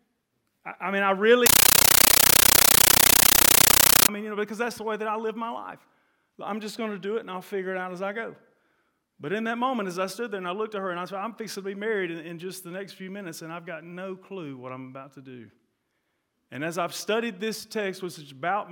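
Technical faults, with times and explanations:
1.46–4.09 s, compressed stream played as audio: a bitstream reached the output and was played as if it were ordinary samples. The pattern points to an AC-3 stream, likely at 640 kbps, sent over a digital link without being decoded. Each coded frame arrives as a 13.3 ms burst of noise followed by silent padding, repeating at 31.25 Hz. That replaces the sound with very loud, harsh, chattering static.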